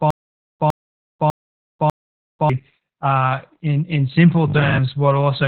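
The whole clip is muffled, hoarse and slightly robotic, with nothing above about 4.3 kHz. That is heavy Opus voice compression: the SILK coder in narrowband mode, coding the excitation coarsely at a rate that fits roughly 8 kbps.

From the start until 2.50 s there is a stutter with silent gaps, already under way when the clip begins. The same 104 ms burst returns four times, every 598 ms, separated by about 493 ms of digital silence. The likely cause is a stalled stream replaying its last fragment at each retry, and the audio meant for those gaps is lost.

From 4.48 to 4.86 s the speech turns into a rigid, metallic buzz at 50 Hz that still loosely tracks the words. This is robotic sound from repeated short buffers. New audio likely arrived too seldom, so a 20 ms stretch was looped to fill the time, and about half of the real audio was skipped.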